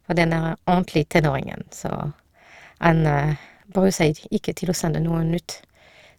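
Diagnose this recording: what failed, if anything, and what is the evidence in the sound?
The failure is overlap-add ripple from a frame-based processing stage, present throughout the speech. The level swings by about 6 dB at around 200 Hz, giving a metallic buzz with extra tones around the voice. The resynthesis windows overlap without summing to constant gain, so every frame imposes one level dip.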